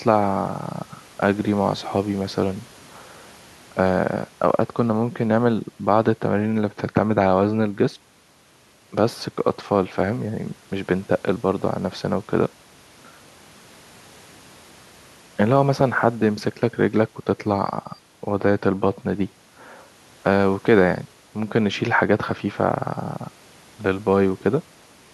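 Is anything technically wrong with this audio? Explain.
No, nothing technically wrong stands out here; the speech comes through steady and intact, with no glitches or problems worth flagging.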